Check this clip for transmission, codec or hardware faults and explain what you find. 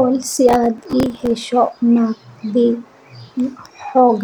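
One fault is present: processor overload crackle, from 0.33 to 1.43 s. The processor repeatedly missed deadlines on very short buffers of a few milliseconds, replaying stale audio each time, which tears the speech with gritty crackle.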